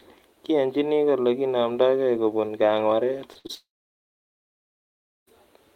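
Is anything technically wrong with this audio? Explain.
Yes. Right after "kole kinamdaikei kopun kang'waret" the speech breaks up in a run of network faults.

At 3.33 s and 3.47 s there is short concealed packet loss. Each time about 20 ms of audio never arrived in time. The receiver filled the hole by extending the sound just before it and then blended back into the real signal. Both appear as brief smears or wobbles, each under 40 ms long.

Between 3.39 and 3.47 s comes a burst of packet loss. About 60 ms went missing in a row. The decoder kept the last sound going and lowered it as the gap went on. The result is a short held buzz or fading hiss. The speech then resumes a little further on, with that stretch gone.

From 3.55 to 5.29 s there is what is likely a long network dropout. About 1.7 s of audio is missing. A short fading continuation is heard first. Then comes roughly 1.6 s of silence or low steady noise. 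The speech returns near 5.3 s, and nothing from the gap is recovered.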